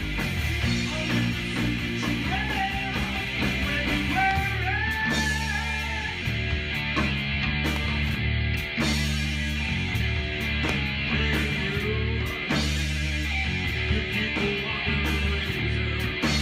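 Three loud pops stand out: at 4.31 to 4.33 s, at 7.76 to 7.78 s, and at 10.69 to 10.71 s. Each is a single sharp thump, rising roughly 15 dB above the sound at the first and last and roughly 10 dB at the middle one, while the audio continues unbroken beneath it. That points to a voltage pulse, likely from static or a switching glitch, added to the signal, rather than a dropout, which would leave a gap.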